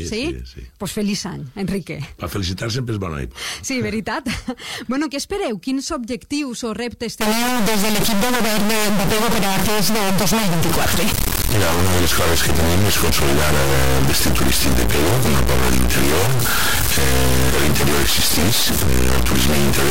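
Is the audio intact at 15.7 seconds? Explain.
No. An integer read as float fault runs from 7.21 s to the end. Its 32-bit integer samples are read as 32-bit floats, so the audio becomes a loud buzzing square wave that drops to silence in quiet passages.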